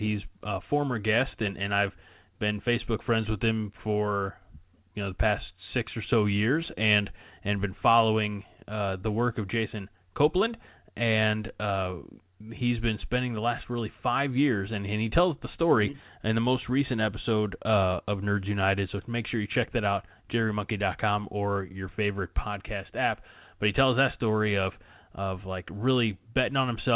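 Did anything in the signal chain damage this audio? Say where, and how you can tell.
No, nothing in the signal chain has damaged this speech recording. It has passed through G.711 A-law telephone coding at 8,000 samples a second, which fits the audible upper limit near 4 kHz and the faint, level-following quantisation hiss that sits well under the signal.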